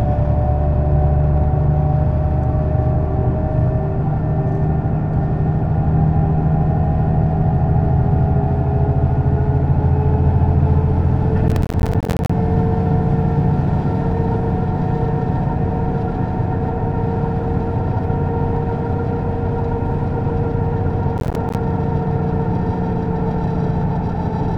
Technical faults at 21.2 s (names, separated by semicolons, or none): processor overload crackle